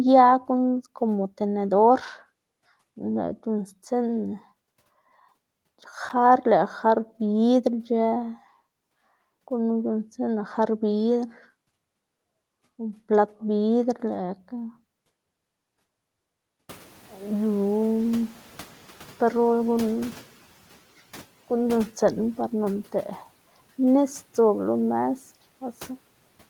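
Room noise jumps at about 16.5 s. From 16.69 to 20.35 s, the noise suppressor is catching up: the noise passes through with less reduction at first, then sinks by about 7 dB.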